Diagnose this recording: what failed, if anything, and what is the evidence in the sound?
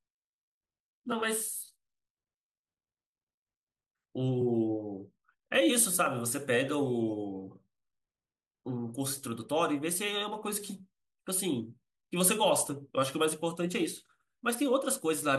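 Chunks out of order, at the driver or buffer stage: around 1.64 to 1.66 s the speech briefly jumbles across the hard joins. A 10 ms chunk was written one chunk late, so it plays after its successor; nothing is lost, only misordered.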